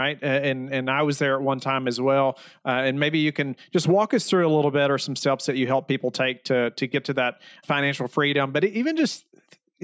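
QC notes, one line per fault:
Nothing stood out on listening to this speech clip.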